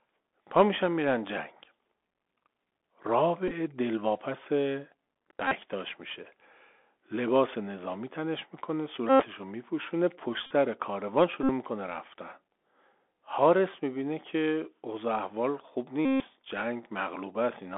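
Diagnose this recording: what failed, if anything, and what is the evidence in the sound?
The Bluetooth CVSD headset codec failed at the codec stage, throughout the clip. The speech is confined to roughly 250 Hz to 3.5 kHz, with a granular hiss beneath it, scratchy s sounds and plainly audible slope distortion on loud, bright syllables. This fits a 64 kbit/s one-bit delta link whose step size cannot keep pace.

Bluetooth headset packets were repeated on the radio link between headset and phone. The chip replayed the last good packet's bits in place of the lost ones, producing a steady buzz near 267 Hz from the 3.75 ms repeat cycle. This happens at 3.48–3.51 s (scattered, with runs of up to about 10 ms), 5.48–5.54 s, 9.09–9.25 s, 10.46–10.52 s, 11.43–11.50 s and 16.05–16.23 s, the longest at about 150 ms.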